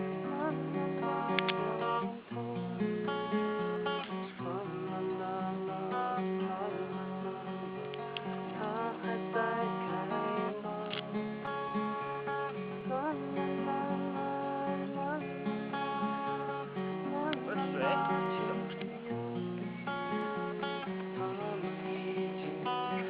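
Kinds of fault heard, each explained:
Clock slip clicks, 0.45 s to the end: faint regular ticks roughly every 0.4 s, likely from two unsynchronised clocks differing by around 70 ppm, each tick one slipped sample.
Repeated stalls (stutter), 11.17 to 12.83 s: the buffer ran dry 11 times, each gap at most 14 ms and continued from the last sound, adding 133 ms of drag with nothing lost.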